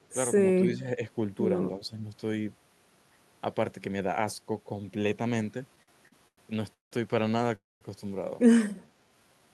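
From 0.61 to 1.0 s and again from 1.79 to 2.02 s, the speech dips by about 5 dB in short patches, likely because the echo canceller mistook simultaneous talk from both ends for echo and suppressed it: speech suppressed in double talk.

Between 5.75 and 6.93 s the jitter buffer kept running dry, giving repeated stalls (stutter). Five short holds, the longest 180 ms and 380 ms in all, stretch the last sound each time. Nothing is lost, but the speech drags and judders.

At 7.55 s a call audio freeze sets in, likely from packets held up in transit emptying the buffer. The last sound carries on briefly, then fades to silence for about 210 ms before the speech resumes at 7.83 s, delayed by 254 ms.

From 8.53 to 9.52 s a jitter buffer slow-down rebuilds the reserve by repeating single pitch periods. The speech plays at 86% speed with its pitch unchanged, gaining 143 ms, so sounds come out drawn out.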